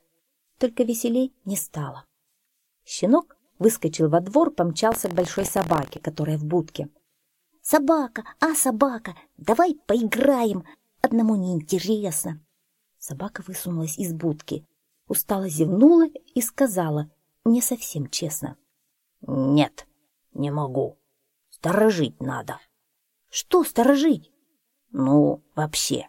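From about 4.90 to 5.99 s there's buffer tearing: a rattly, robotic buzz at roughly 43 Hz, which fits a 1024-sample buffer. The writer and hardware have slipped, so a small slice of each period replays audio about 50 ms stale, hard-joined on both sides.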